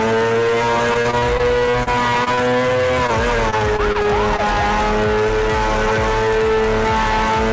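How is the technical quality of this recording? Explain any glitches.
The main problem is two choppy patches of repeated packet loss (robotic sound), from 0.94 to 2.49 s and again from 3.07 to 4.40 s. Over these stretches the stream keeps losing packets, and each hole is papered over by stretching the last bit of sound. That leaves the audio choppy, with pieces missing. The first patch has about a dozen short holes, the longest 32 ms, and roughly 15% of it is concealed. The second has about six, up to 21 ms, and roughly 9% is concealed. Nothing comes through above 8 kHz, which fits a G.722 call link at 64 kbps.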